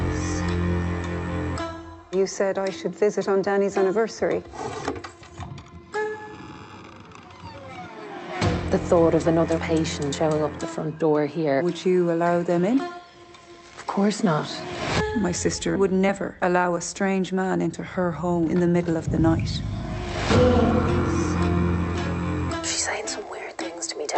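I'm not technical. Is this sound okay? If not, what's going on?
Yes, it's fine: nothing's wrong here, and the trimmed top end, with no sound above about 8 kHz, is just the normal character of a call connection carrying the audio.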